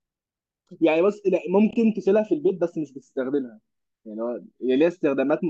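At about 1.70 s there's a quick frames-out-of-order glitch running to 1.76 s. Two neighbouring chunks of roughly 26.1 ms each got decoded in swapped order, which points to single codec frames trading places. So that brief stretch of speech plays its second half first, giving a tiny garbled flutter. Nothing's actually missing, and the timing picks up cleanly afterwards.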